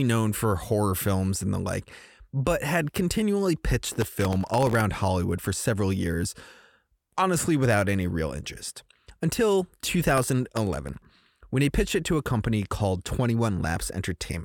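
Gritty crackle tears through the speech from 3.81 to 4.80 s, after "like but had continually", and again from 10.18 to 11.10 s, between "any real interest until" and "when he pitched it". This is processor overload crackle: dozens of sub-millisecond buffers missed their deadlines, each replaced by a hard-edged scrap of stale audio.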